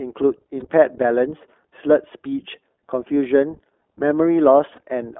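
The speech runs through the iLBC codec for the whole clip, a narrowband VoIP coder that rebuilds each 20 ms frame's excitation independently of the one before, at a rate that fits its 15.2 kbps mode. The line band confines everything to roughly 300 Hz to 3.4 kHz, so the voice is thin and muffled, and the coding damage is plainly audible as a rough, slightly synthetic texture.

Lost iLBC frames interrupt the stream twice, from 0.60 to 0.64 s and from 4.76 to 4.79 s. Each dropout fits the loss of a single 20 ms frame. The decoder filled each gap by repeating the last pitch cycle blended with noise, so each spot is a tiny held, faintly buzzy vowel-like smear rather than silence. Because each iLBC frame decodes on its own, the voice snaps back almost at once afterward.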